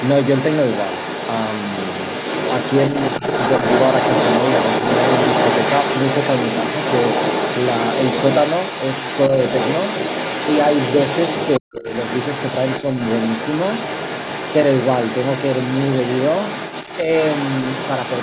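From 0.0 to 11.6 s, the other side's voice leaks through. A second voice sits about as loud as the talker. The echo canceller likely left loudspeaker sound in the microphone signal.

From 11.59 to 11.86 s, speech is suppressed in double talk. The talker's voice drops sharply, by roughly 40 dB at its deepest, for about a third of a second. The canceller likely could not separate talker from echo and turned both down.

From 11.78 s to the end, the other side's voice leaks through again. It is now quieter, around 10 dB below the talker. Residual echo was likely left uncancelled.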